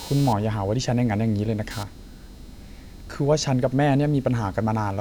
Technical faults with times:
0.00-5.01 computer activity noise

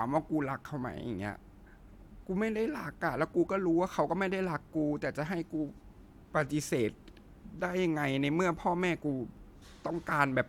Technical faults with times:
none

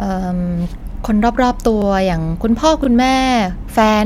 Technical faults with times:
0.79-0.82 overlapping chunks
1.82-1.84 overlapping chunks
2.84-2.87 overlapping chunks

